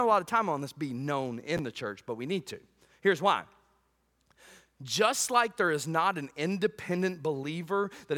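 A single 10.67 ms chunk was delivered one chunk late, so chunks played out of order from 1.57 to 1.59 s, between "on this be known" and "the church but we". Nothing is lost, but the swapped segments leave three hard joins, heard as a brief jumbled stutter.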